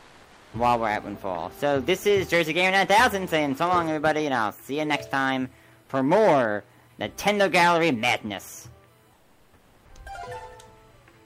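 A USB whine runs under the whole clip: a fixed tone at 1 kHz, strongest at that fundamental and sitting roughly 45 dB below the signal. It comes from the USB bus drawing current in 1 ms frames, which leaks into the audio through the power or ground. On a spectrogram it is a thin, perfectly straight horizontal line at 1 kHz from start to finish. In the waveform it is too low to see.

From 0.0 to 0.53 s, the background, sitting about 32 dB below the loudest passages, is replaced by comfort noise. The level drops only about 1 dB, but the background loses its detail and becomes a smooth, static hiss. The likely cause is discontinuous transmission: the sender paused during silence, and the receiver synthesised noise shaped like the background, in a way that points to Opus DTX. On a spectrogram this shows as an evenly textured, featureless wash. The same thing happens from 9.13 to 9.85 s, where the background is about 36 dB down and the substituted noise is about 4 dB quieter. 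That drop appears as a slight step in the waveform envelope.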